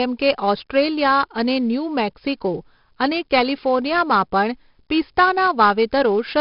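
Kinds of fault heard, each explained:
4-bit ADPCM compression: coarse predicted steps add heavy gritty hiss tracking loudness, spectrogram shows level-following noise floor and nothing above 5.3 kHz, fitting roughly 44 kbps.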